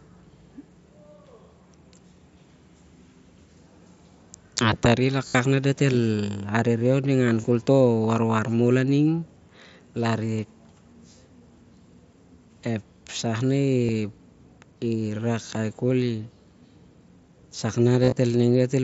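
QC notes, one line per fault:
5.28–5.35 s, 7.41–7.44 s, 13.86–13.89 s, 18.03–18.16 s: concealed Bluetooth headset packet loss. Headset-to-phone packets dropped, and the receiver filled each gap by repeating the closest-matching recent waveform segment. The gaps cover about 68 ms, 23 ms, 30 ms and 83 ms. The first gives a held, buzzy tone at full level with a slight warble on recovery. The last is broken up over 135 ms, longest run 38 ms.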